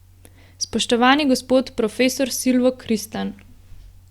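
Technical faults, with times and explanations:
Nothing in this speech recording stood out as a technical problem on listening.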